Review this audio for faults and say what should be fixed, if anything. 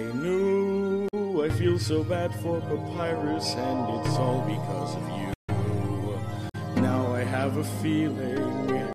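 A playback stall cuts the sound at 5.33 s. Silence lasts about 144 ms, and the audio resumes at 5.50 s. The likely cause is the player running short of data or its thread being blocked. Larger buffering and keeping audio work off busy threads would prevent it.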